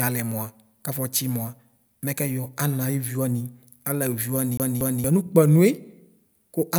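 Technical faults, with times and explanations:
4.57 to 5.04 s: CD stuck on one turn. The speech catches on a 0.23 s slice and plays it twice, with a tiny mute at each jump, because a scratch kicks the laser back a track at the same spot every rotation, giving that quick, even stutter.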